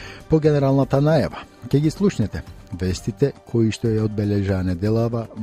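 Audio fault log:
Nothing stood out on listening.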